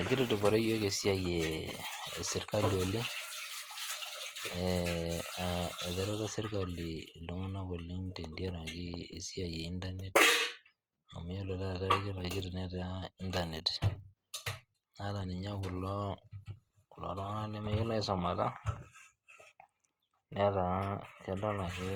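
Throughout, the speech sounds grainy and rough, likely from Opus compression near 24 kbps. A spectrogram shows filled upper bands reaching 20.3 kHz.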